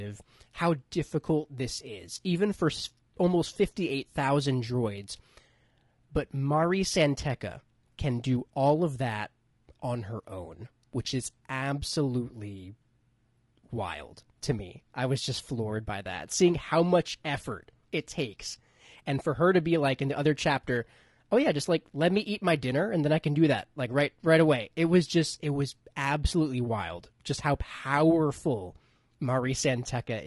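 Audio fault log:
throughout, low-delay AAC compression: speech sounds rough and grainy, with noise between harmonics, likely from AAC-ELD's short frames resolving pitch poorly at around 32 kbps.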